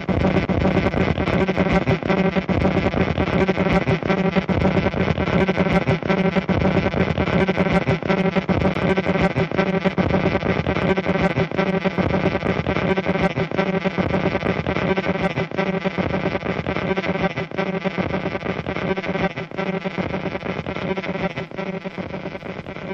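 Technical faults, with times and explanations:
0.45 s and 8.74 s, CD skip: At each point the playback briefly mutes, for a few milliseconds at 0.45 s and around 15 ms at 8.74 s, then resumes from a different place in the material, so the sound breaks with a tick or tiny gap and an abrupt jump in continuity. This happens when a knock or a disc flaw throws the laser onto another turn of the spiral track, and the player silences its output until it locks back on.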